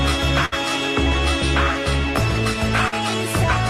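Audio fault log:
0.28–3.69 s, clock slip clicks: Two devices likely run on separate, unmatched clocks, around 70 ppm apart, so a single sample is dropped or repeated whenever the drift reaches a whole sample. That puts a small tick in the sound roughly every 0.4 s.
0.45–0.54 s, burst of packet loss: Packets were lost or arrived too late, leaving a 63 ms gap, which the receiver filled by extending the last sound and fading it down. About 60 ms of real audio is gone, so the sound jumps ahead when it resumes.
2.88–2.94 s, short concealed packet loss: About 40 ms of audio failed to reach the decoder in time. The receiver bridged 42 ms by continuing the preceding sound and then blending back into the real signal, so this moment is heard as a brief smear or wobble.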